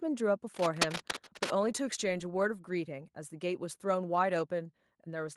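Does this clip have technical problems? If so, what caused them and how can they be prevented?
Yes. From 0.54 to 1.52 s there is cable scratch noise. Dense, uneven bursts of scratching and rustling sit over the speech. They are nearly as loud as the speech itself. The likely cause is a worn cable, connector or control being moved. Its contact resistance jumps around quickly, and each jump becomes a burst of noise. To prevent it, replace the worn cable or clean the connector, and keep it still while recording.

Inside that stretch, from 0.81 to 0.84 s, there is microphone overload. The loudest peak goes about 7 dB past the converter's limit. A small share of samples have their tops flattened. This adds a short, harsh crackle to that syllable. The likely cause is input gain set too high for the peak. To prevent it, lower the microphone gain so the loudest syllables stay several decibels below full scale.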